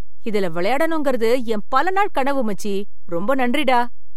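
A DC offset runs through the whole of this speech recording. The waveform sits shifted off zero by a constant of about -18 dBFS. You cannot hear it as a tone. It shows as steady energy at 0 Hz and eats into the available headroom.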